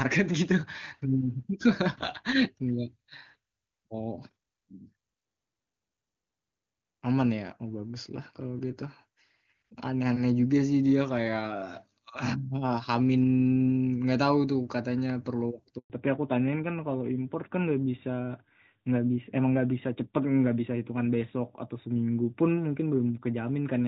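At 15.78 s a handover gap interrupts the call as it switches networks. No speech frames arrive for 120 ms, so the audio cuts to silence until 15.90 s. From 15.90 s to the end, a fallback to narrowband drops the call off HD Voice onto an older narrowband codec, removing everything above 4 kHz and leaving the speech duller and rougher than the crisp wideband sound before the gap.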